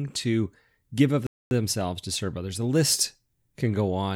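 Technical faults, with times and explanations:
1.27 to 1.51 s, playback stall: right after "give of" the speech cuts to silence for about 245 ms, then carries on with "to serve others". Most likely the player briefly ran out of data or its thread got blocked.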